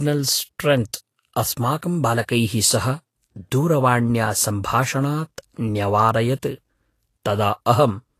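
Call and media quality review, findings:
Speech hissy and grainy throughout, consonant onsets blurred. Spectrogram: hard ceiling at 14.2 kHz, patchy speckled treble below it. Likely Vorbis compression: residue quantised so coarsely that treble detail turns to noise, consistent with roughly 36 kbps.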